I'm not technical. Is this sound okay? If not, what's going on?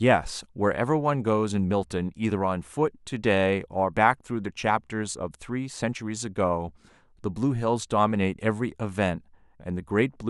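Yes, no faults heard.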